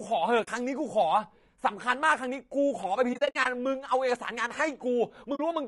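Throughout, the speech sounds rough and grainy, with noise filling the gaps between harmonics rather than a steady hiss, likely low-delay AAC compression at around 32 kbps. AAC frame loss with muting leaves soft-faded holes at 0.43–0.48 s, scattered across 3.13–3.46 s (longest about 70 ms), and at 5.35–5.40 s, without the click of a hard dropout.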